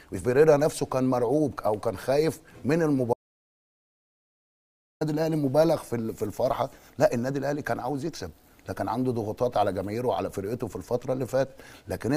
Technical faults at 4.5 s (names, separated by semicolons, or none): audio dropout to silence